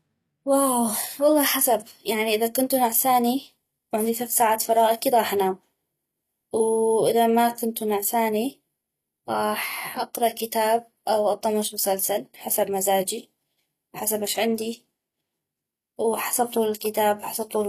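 From start to end, the speech carries plainly audible codec damage, likely from HE-AAC compression at a low bitrate. The treble is rebuilt from copied lower bands rather than coded. So s sounds turn gritty and lispy. Nothing is heard above 15 kHz.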